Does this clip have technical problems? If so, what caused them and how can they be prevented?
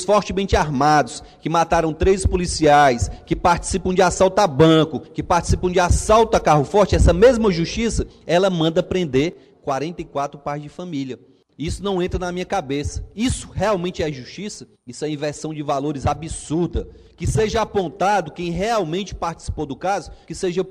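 Yes. From 9.33 s to the end at 20.71 s the sound abruptly drops by about 6 dB and stays there. This is likely one channel dropping out: with one stereo side gone, the mono sum loses half of the shared signal. Secure connections and monitoring both channel meters during capture would prevent it.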